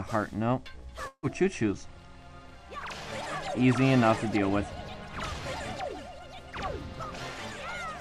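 From 1.07 s to 1.26 s the sound breaks off. The last moment before the break is held on as a fading buzz or hiss for about 154 ms, followed by roughly 50 ms of silence. The audio then returns with about 160 ms of material simply gone. This is most likely a long network dropout: nothing arrived, so the receiver padded the gap and later resumed past the lost stretch. Unlike a brief packet-loss glitch, it lasts long enough to decay into silence, and the sound skips forward rather than picking up where it stopped.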